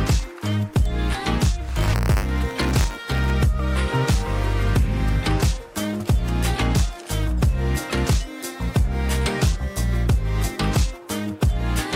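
From 1.64 to 3.31 s the audio carries buffer tearing. The writing and reading sides of a ring buffer have drifted into each other, so every period splices in a small slice of audio from roughly 30 ms earlier, hard-edged at both ends. The result is a steady robotic buzz at 100 Hz, which fits a 10 ms period. Unlike random crackle or dropouts, the buzz is evenly spaced and follows the signal.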